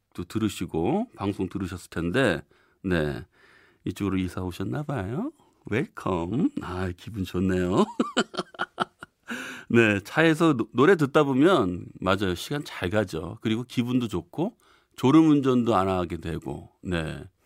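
No technical faults are audible anywhere in the speech.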